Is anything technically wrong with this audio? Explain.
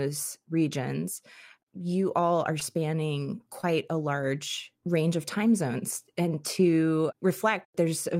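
Yes. There is short concealed packet loss at 2.59 to 2.63 s and again at 3.61 to 3.65 s. In each spot a few hundredths of a second of the speech arrived too late for the decoder. The receiver bridged the hole by extending the preceding sound, then faded back into the real signal. You hear a brief smear or wobble rather than silence. An outright dropout would leave a hard gap or click, not this continuous, blurred patch.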